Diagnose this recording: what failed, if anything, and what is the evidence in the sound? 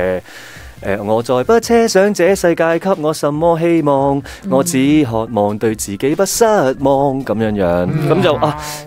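From 0.00 to 1.55 s the sound carries a grainy, rasping distortion that rises and falls with the signal itself, roughening the quieter moments. The grit sits roughly 35 dB below the signal and stops at 1.55 s. This points to low bit depth without dither at the sample-format conversion stage, likely a reduction to about 8 bits by plain truncation, so the rounding error tracks the waveform rather than being spread out as benign noise.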